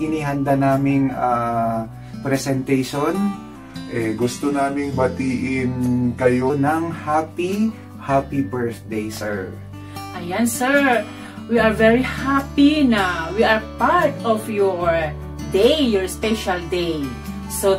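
From 3.56 s to 6.50 s, a section at the wrong speed plays at 0.893 times its proper rate, so the sound turns slower and deeper, dropping by about two semitones before snapping back. The likely cause is an editor or player fitting that stretch to the wrong clock. What separates it from a pitch-shift or time-stretch error is that tempo and pitch fall together, and both return to normal at the same instant.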